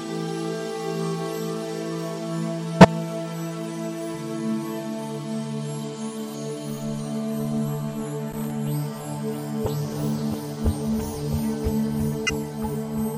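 A sharp squeaking blip lands at 2.80 to 2.85 s. It is a corrupt frame decoded: bits inside a compressed frame were damaged, and the decoder played it anyway. The misread gains and codes put energy at frequencies that have nothing to do with the surrounding sound. The disturbance spans about two frames' worth of time, which is why it is a brief chirp rather than a sustained noise.

From 8.32 to 8.50 s, a ragged, irregular scratching crackle breaks through for under a fifth of a second. This is loose connector crackle. A worn or dirty contact somewhere in the chain was rapidly making and breaking. Each break chops the signal, and any DC on the line adds pops, giving the uneven, gritty texture instead of a single clean pop.

A second corrupt frame decoded appears at 12.26 to 12.30 s. It is another short burst of misplaced energy, peaking around -10 dBFS, so it is quieter than the first. Here about 20 ms of audio is also skipped. 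The garbled frames took the place of the real material, and the sound jumps across the gap instead of continuing smoothly.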